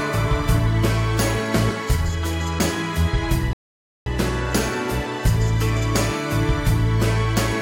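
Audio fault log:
3.53–4.06 s: rebuffering stall. Playback drops to silence for 0.53 s, then resumes at exactly the point where it stopped, with nothing skipped. The player exhausted its downloaded audio and waited for more data, so the gap adds time instead of removing content.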